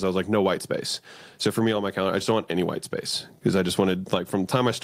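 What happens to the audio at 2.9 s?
Nothing goes wrong at 2.9 s; the speech carries on intact through that moment, with no dropout, click, distortion or other fault to be heard there.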